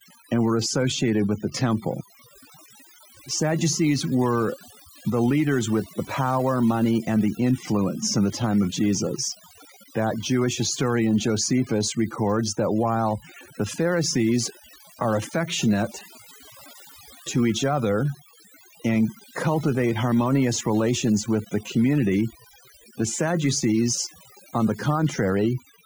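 From start to finish the speech carries the marks of overdone noise removal. A noise reducer was pushed far too hard here, so any frequency band sitting close to its idea of the noise gets pulled way down or switched off entirely, and the softer parts of the voice get thrown out along with the noise. What's left is a lowered background dotted with little twinkling specks.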